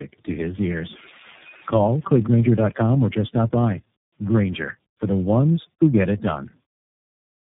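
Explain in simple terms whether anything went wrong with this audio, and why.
Something did go wrong, from start to finish. This is tandem speech coding. The speech seems to have passed through three phone-network speech coders in a row. Each one squeezed an already damaged copy. So it sounds rough, muffled and warbly, with nothing above 3.8 kHz.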